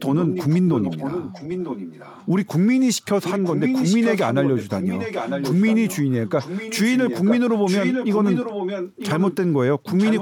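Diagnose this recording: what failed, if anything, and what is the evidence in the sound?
Echo leak, call processing: speech repeats 0.95 s late at 0.19–2.26, 3.22–9.36 and 9.98–10.21 s, likely a far-end echo canceller passing loudspeaker pickup back.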